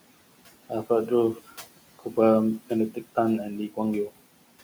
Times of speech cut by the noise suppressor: 0.39-0.87, 1.35-2.17, 2.91-3.17, 4.09-4.49

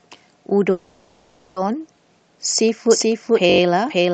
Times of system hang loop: 3.50-3.60

